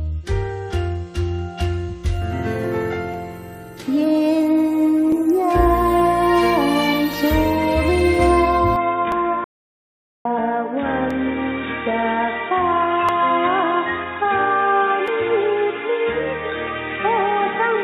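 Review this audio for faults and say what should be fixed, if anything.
Overlap between stream segments causes tiny skips at 1.15, 3.14, 5.12, 7.14, 9.12, 11.11, 13.09 and 15.08 s. The 2-second spacing fits 2-second segments whose overlapping time stamps were trimmed.

From 8.76 s to the end, the sound turns dull with no content above 3.8 kHz. A faint new noise floor appears, with no gap and no level jump. The likely cause is an input switched to a poorer device.

An audio dropout to silence runs from 9.44 to 10.25 s. Sound cuts out for about 0.81 s, leaving silence with no room tone. The input was likely lost.

To prevent these, align segment time stamps exactly, lock recording to one input device, and monitor input connection status during capture.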